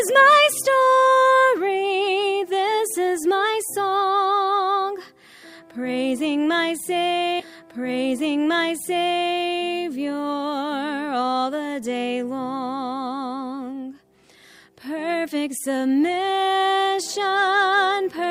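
At 7.39 s a stream segment repeated: the player queued it twice, so a small blip marks the jump back and 2 s replays until 9.39 s.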